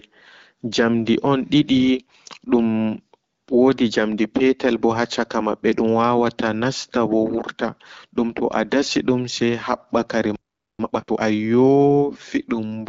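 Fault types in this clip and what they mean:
AMR bit errors, 2.08 to 2.18 s: corrupted low-protection bits in about five frames, around 7 percent error rate, misplace excitation pulses and skew fine gain and spectral values, so the speech turns briefly hoarse and gargly just before "dum wodi".
Playback stall, 10.36 to 10.79 s: the output drops to silence for about 440 ms mid-flow, likely because the player's buffer ran dry or its thread was blocked, then the speech resumes after the gap.
Time-compressed catch-up, 10.79 to 11.21 s: right after the stall the backlog is cleared by cutting and cross-fading short segments at 2x speed, so the speech sounds rushed at unchanged pitch across those 0.42 s.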